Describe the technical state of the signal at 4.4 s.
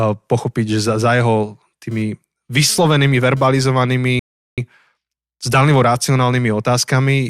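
At 4.4 s the speech is in the middle of a rebuffering stall. The sound drops to silence at 4.19 s and stays silent until 4.58 s. The player has run out of downloaded audio and halts until more data arrives. When playback resumes, it picks up exactly where it stopped. No speech is skipped. The gap simply inserts about 0.38 s of dead air, so the clip runs that much longer.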